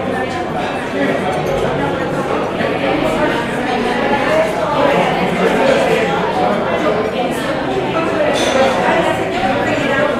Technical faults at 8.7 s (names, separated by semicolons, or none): none